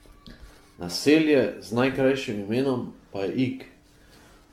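Throughout, the speech sounds swirly, hollow and smeared, with blurred consonant onsets and nothing above 17 kHz. This is likely generation loss from around ten lossy re-encodes, which fits AAC-LC at 96 kbit/s. Each pass requantises on a shifted frame grid. A spectrogram would show a hard ceiling and speckled holes between harmonics.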